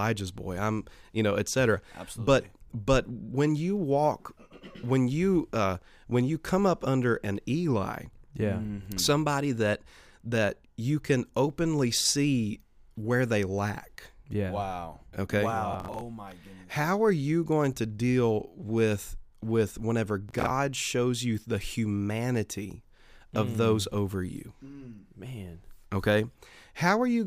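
At 15.73 to 16.01 s and again at 20.29 to 20.50 s, the speech breaks into processor overload crackle: a run of missed buffer deadlines, each refilling a slot of roughly 10 ms with stale audio, producing gritty, hard-edged tearing that clears once the load drops.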